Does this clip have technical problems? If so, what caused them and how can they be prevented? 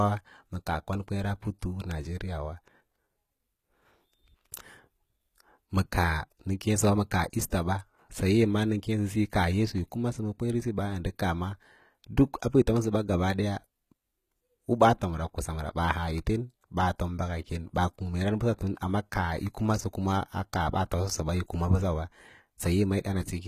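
Yes. Throughout the speech, the s sounds come out gritty and lispy, and the top end has a bright but synthetic, metallic sheen. The likely cause is HE-AAC compression, where only the lower spectrum is properly coded and the treble is rebuilt by copying lower bands upward, so harmonics fail to line up above the crossover. The damage is plainly audible and fits a very low bitrate, around 20 kbps. On a spectrogram, the upper band shows repeated, smeared copies of lower structure under a blocky envelope, with nothing above 14.9 kHz. To prevent it, encode at a higher bitrate, or with a codec mode that codes the full band directly.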